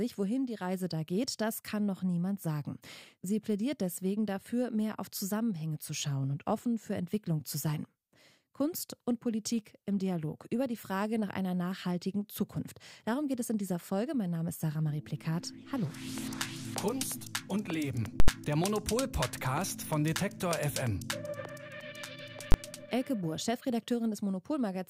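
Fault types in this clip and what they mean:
Invalid numbers at full scale: a calculation produced infinite or invalid values, which were then clamped to the maximum positive or negative sample value, so the output sits flat at one extreme value, far beyond the audio's peaks, for a whole block. From 18.2 to 18.28 s (80 ms) this is heard as a very loud pop at each edge with no sound between. The 20 ms block at 22.52 to 22.54 s is so short that it collapses into a single bang.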